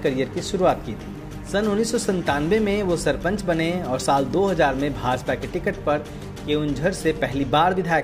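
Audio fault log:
No fault is logged for this audio.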